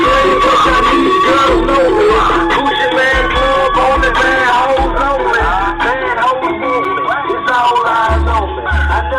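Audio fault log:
6.85 s, block of digital silence: the output drops to zero for about 5.3 ms, consistent with a 256-sample buffer not being filled in time. The gap is too short to hear as a hole, so it lands as a single tick. Unlike a fade-based dropout, both edges switch abruptly.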